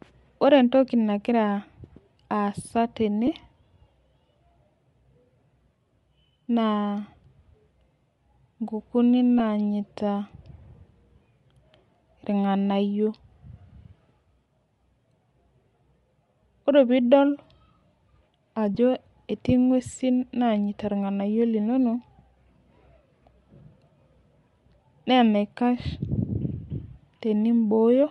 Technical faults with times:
0.00-28.11 Bluetooth LC3 compression
3.27 lost LE Audio frames
9.39 lost LE Audio frames
18.75 lost LE Audio frames

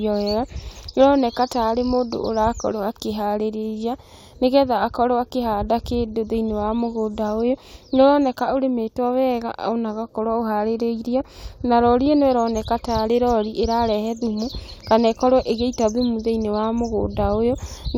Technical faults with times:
none

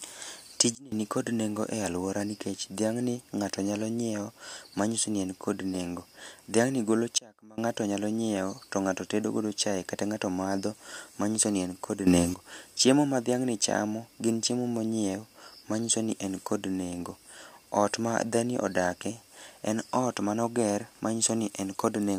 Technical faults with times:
0.75-0.92 sudden gain jump
7.18-7.58 sudden gain jump
12.07-12.34 sudden gain jump

